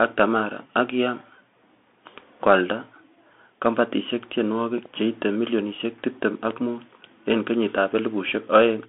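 Throughout, the speech passes through a Bluetooth CVSD headset codec, which fits a 64 kbit/s link. It sends one bit per sample, up or down, with an adapting step. The band runs about 200 Hz to 3.5 kHz, with nothing above 3.8 kHz. Loud passages overrun the step and distort. A granular hiss sits underneath.

At 4.78 to 4.88 s comes a loud pop, heard as two sharp clicks just before "cheite milionisiek tibtem". They peak a few decibels above the speech. A sudden voltage spike, likely from a switch or static discharge, was added to the signal, and the speech continues beneath it.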